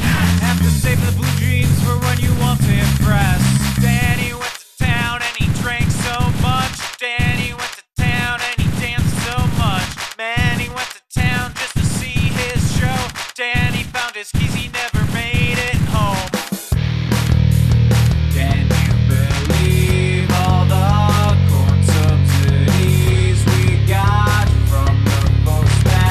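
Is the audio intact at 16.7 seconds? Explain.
Yes, the audio is intact at 16.7 seconds, with no fault audible at that moment.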